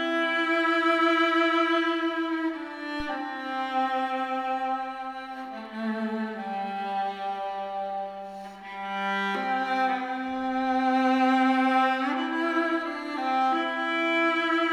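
A deep, dull thump lands at 3.00 s and dies away by 3.15 s, peaking at about -27 dBFS and decaying in roughly 34 ms. This is a phantom power thump: a supply switched on or off on a live input sent a voltage step through the coupling capacitors.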